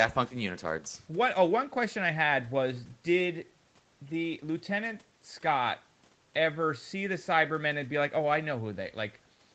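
Nothing goes wrong anywhere in this speech, which simply carries the ordinary sound of a call, with the microphone processing and the Opus call link leaving no content above about 8 kHz.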